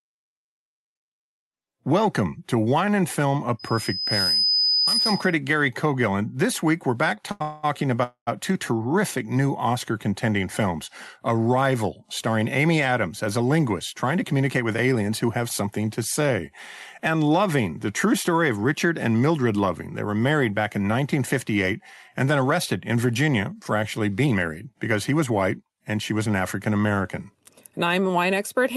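From 3.59 to 5.38 s there's a loudspeaker feedback squeal: a mic picking up its own speaker, with the loop gain tipping over one at 5 kHz. The tone swells out of the speech in well under a second and ends up a little louder than the talker before it's cut off.

At 7.31 s comes a short stall from a late packet. The next chunk of audio didn't show up in time, so the receiver held the last sound for about 88 ms, then carried on from the same spot. Nothing is lost; the sound is just stretched with a faint buzz.

Right after that, from 7.42 to 7.65 s, there's a call audio freeze, likely from packets held up in transit and an empty jitter buffer. The held sound smears on as a fading buzz for about 210 ms. A second freeze runs from 8.03 to 8.29 s, about 236 ms, and this time the fill decays into roughly 100 ms of silence before the speech picks up where it left off.

Then the receiver trims the backlog with jitter buffer speed-up, snipping out pitch-period-sized slices so the speech hurries along without changing pitch. 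From 12.41 to 15.63 s it runs at 107%, dropping around 0.2 s. From 18.57 to 19.31 s it's 107% again, losing only a short sliver. From 24.25 to 26.41 s it pushes to 112%, shaving off about 0.3 s, and that stretch sounds noticeably rushed.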